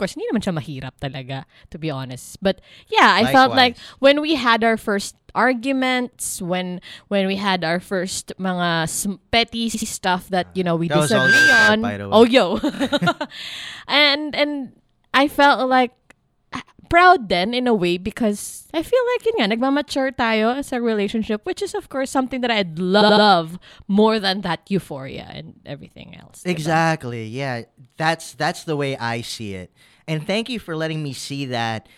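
Repeated frames at 2.21 s and 9.73 s: a run of compressed frames was delivered more than once, so the decoder replays the same slice. At 2.21 s a 26.1 ms block, consistent with a single MP3-size frame, plays four extra times, and at 9.73 s a 78.4 ms block plays twice more. Each is heard as a quick stutter.

Loudspeaker feedback squeal from 11.01 s to 11.76 s: the microphone is hearing its own loudspeaker, and at 1.6 kHz the loop gain exceeds one. A single tone swells over roughly a third of a second to about 5 dB above the speech.

Repeated frames recur at 12.74 s, where a 26.1 ms block is played twice more, and at 23.00 s, where a 78.4 ms block is played three more times.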